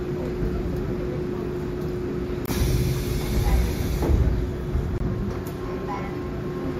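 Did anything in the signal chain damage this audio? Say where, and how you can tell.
Yes: a gap between chunks at the 2.5 s chunk joins inserts 23 ms of silence at 2.46 and 4.98 s, cutting short holes without losing sound.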